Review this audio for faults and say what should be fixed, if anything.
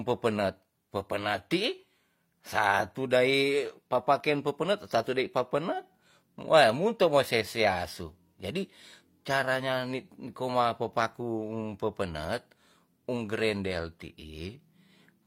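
At 4.20 to 4.22 s there is a tiny skip in the speech. This is an overlap between stream segments. The audio arrives in segments of 4.0 s. At this boundary, two segments claim the same stretch of time. The player trims the overlap, but that sound was never actually duplicated. About 20 ms of real audio is lost, and the waveform jumps across the gap.

To prevent it, make the segmenter write exact, contiguous timestamps so each segment starts where the previous one ends.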